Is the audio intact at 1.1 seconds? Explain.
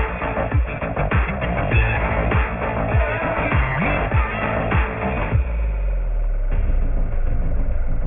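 No. At 1.1 s the audio shows aliasing, present throughout: it was downsampled without an anti-alias filter, in a way that fits a rate near 6 kHz, so content above 3 kHz folds back as unrelated, gritty tones roughly 10 dB below the signal, crowding the band edge.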